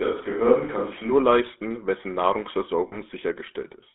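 From the first moment to the end, the speech carries the buzzy, gravelly roughness of the GSM full-rate codec, consistent with its 13 kbps coding. The codec rebuilds the voice from a vocal-tract model driven by coarse pulse excitation. On a spectrogram, energy sits between 250 Hz and 3.6 kHz, with nothing above.

From the start until 1.10 s, the sound is already roomy and hollow, with thinner bass and a steady room noise about 25 dB below the speech. The likely cause is a switch to a distant microphone in place of the close one, with little change in level. A spectrogram shows reverberant smearing and a raised noise floor until the sudden change back at 1.10 s.

From 2.88 to 2.97 s, lost GSM frames make the sound hang as a brief, rough metallic ring. The decoder repeats the last good frame's settings, and the 40 ms gap fits two lost frames. On a waveform it shows as a short, repetitive stretch.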